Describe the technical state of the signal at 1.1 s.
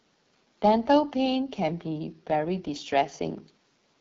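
At 1.1 s the speech carries AMR wideband (HD Voice) codec damage, present across the whole clip. The coder models the voice up to 6.4 kHz and fills the top band with shaped noise. The plainly rough, raspy texture fits its low 8.85 kbit/s mode.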